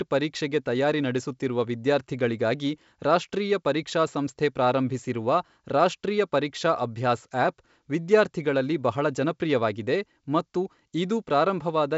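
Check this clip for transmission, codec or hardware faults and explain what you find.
No transmission, codec or hardware faults found; the speech runs over G.722 wideband coding at 64 kbit/s, with content stopping at about 7 kHz or a little above and at most a faint trace of the codec in the upper band.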